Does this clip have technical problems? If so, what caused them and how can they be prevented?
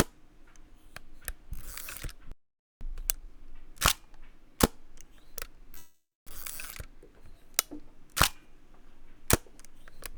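Yes, there are three problems.

From 2.32 to 2.81 s the sound simply stops for about half a second, then continues where it left off. This is a playback stall, likely caused by the player running out of buffered data or its audio thread being blocked. Unlike a call freeze, the gap is clean silence with no buzzy continuation of the last sound leading into it. A larger playback buffer and keeping the audio thread free of blocking work would prevent it.

Straight after, from 2.81 to 3.29 s, the audio runs at double speed while its pitch stays normal. This is time-compressed catch-up: the player works off the backlog from the stall by cutting out short pieces and cross-fading the joins. Because the pitch does not rise, it differs from simply playing faster, and nothing is skipped abruptly as in a dropout. Avoiding the stall removes the need for it, or the catch-up can be spread over a longer, gentler stretch.

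From 5.77 to 6.30 s comes a call audio freeze. The last sound is stretched into a fading buzz or hiss, then about 0.26 s of silence, and the audio resumes exactly where it stopped, nothing missing but now about 0.49 s later. This is likely caused by packets held up in transit emptying the jitter buffer. The synthetic fill before the silence separates it from the clean stall. A deeper adaptive jitter buffer and a more stable network path would prevent it.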